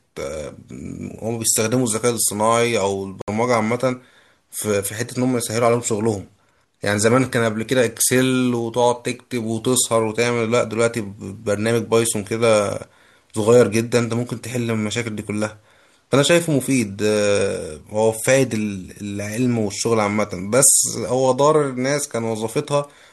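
From 3.22 to 3.28 s there is a digital broadcast dropout. The receiver muted on failed frames. The speech cuts briefly to silence, losing about 64 ms.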